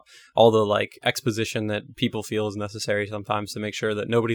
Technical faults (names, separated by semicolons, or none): none